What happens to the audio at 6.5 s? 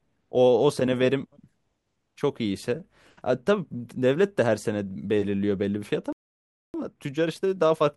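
At 6.5 s the speech is cut off mid-flow and goes silent for about 0.62 s, from 6.13 to 6.74 s, before carrying on. This is a playback stall, most likely the player running short of data or its thread being blocked until it recovered.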